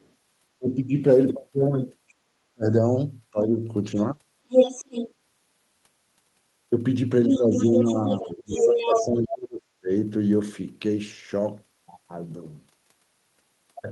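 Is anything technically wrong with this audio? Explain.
Yes. The recording has two related echo-control faults.

Other side's voice leaking through appears four times: brief, very faint fragments at 0.0 to 0.08 s and 2.09 to 2.14 s, roughly 35 to 40 dB below the speech, then longer stretches at 3.97 to 5.13 s and 7.27 to 9.05 s where the second voice is about as loud as the talker. The likely cause is the far-end audio from a loudspeaker reaching the microphone and getting past the echo canceller.

Speech suppressed in double talk occurs at 0.58 to 0.91 s, 2.52 to 2.73 s, 3.32 to 3.52 s and 7.28 to 9.9 s. The talker's level drops sharply, by roughly 20 to 40 dB at its deepest, and the longest episode affects around two seconds of speech. This is likely the canceller failing to tell the local voice from loudspeaker echo when both sides talk at once and attenuating everything.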